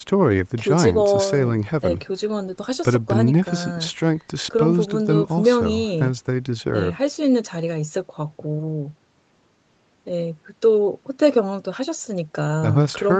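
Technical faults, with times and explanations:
Nothing stood out on listening to this speech, which has the top end limited to about 8 kHz, as expected from a call path.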